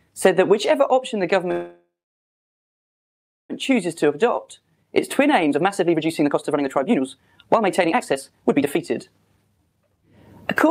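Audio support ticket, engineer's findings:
Call audio freeze, 1.51 to 3.53 s. Sound stops for about 2 s; the last sound is carried on briefly, then about 1.6 s of silence. Playback resumes where it stopped; nothing lost, but about 2 s of delay is added. Likely cause: delayed packets starving the jitter buffer at the receiver.

Jitter buffer speed-up, 4.04 to 10.03 s. Audio runs at about 133% speed with unchanged pitch and sounds hurried. Receiver trims short pitch-period slices repeatedly to drain the backlog built up during the freeze, removing about two seconds of audio in total.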